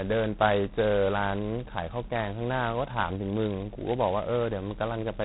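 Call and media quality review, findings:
G.726 ADPCM, whole clip: harsh rasping hiss tracking speech level, consistent with 16 kbit/s. Spectrogram shows a hard ceiling at 3.9 kHz, with grainy noise filling each syllable's band.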